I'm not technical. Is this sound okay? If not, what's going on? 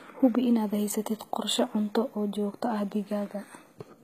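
No. Throughout the clip, the s sounds come out gritty and metallic, and the brightness sounds synthetic. That points to likely HE-AAC compression, which stores only the lower tones and rebuilds the treble by copying them upward, so the highs don't quite match.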